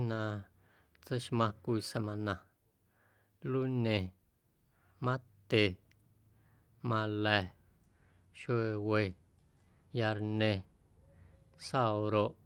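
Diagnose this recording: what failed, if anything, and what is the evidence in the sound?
Network stage, with the codec covering for it. At 1.49 s there's a brief rough, noisy patch in the speech, about 20 ms long and with no actual gap. That's a lost packet rebuilt from error correction, consistent with a single dropped Opus packet. The next packet carried a low-bitrate backup copy of that frame, so the decoder played the coarser copy instead of silence, and that's why it sounds grainy.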